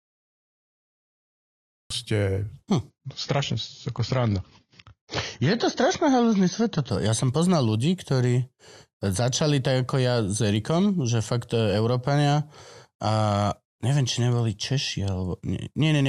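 The first 1.9 seconds are pure digital silence, and then the speech just appears at 1.90 s, already mid-sound with no attack or fade-in. That's a cut-off start: the recording or stream kicked in late and caught the talker partway through.

From 2.90 s to 6.90 s the sound suddenly goes dull, with nothing left above about 7 kHz and more smeary codec artefacts. There's no gap; it just snaps down in quality and back up again. That's an adaptive stream dropping to a lower bitrate for those four seconds, which fits a switch from roughly 96 kbit/s AAC down to about 24 kbit/s while the connection was struggling.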